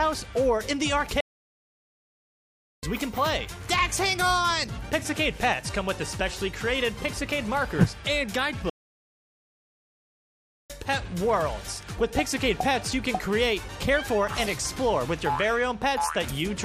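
At 1.20 s the sound cuts to silence mid-flow and returns at 2.83 s, a gap of about 1.6 s; at 8.70 s it drops out again until 10.70 s, a full 2.0 s. These playback stalls are likely the player starving for data or its thread being blocked.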